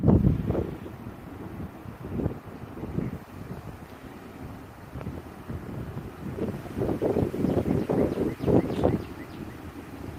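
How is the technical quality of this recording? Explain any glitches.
No glitches or technical faults can be heard anywhere in the recording.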